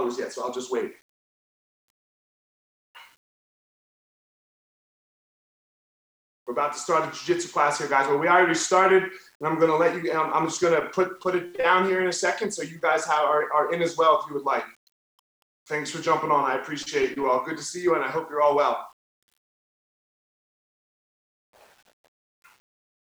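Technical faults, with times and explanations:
Throughout, low bit depth without dither: quiet passages turn gritty and grainy, with error riding about 40 dB below the signal, which fits samples likely rounded to 9 bits. The waveform shows visible stair-steps at low levels; the spectrogram shows signal-following distortion instead of a smooth noise floor.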